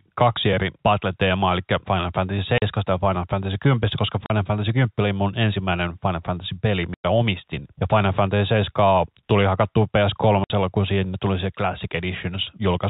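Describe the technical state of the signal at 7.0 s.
The signal drops out entirely between 6.94 and 7.04 s, a case of packet loss filled with silence. About 100 ms of audio never arrived, and the receiver played silence in its place. That length fits five consecutive 20 ms packets. The speech is cut mid-flow with abrupt edges. The surrounding G.711 telephone band stays narrow, with nothing above 4 kHz.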